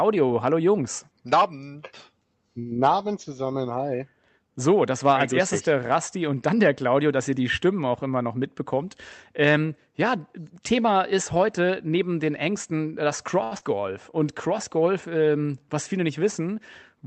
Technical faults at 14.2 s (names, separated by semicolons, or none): jitter buffer slow-down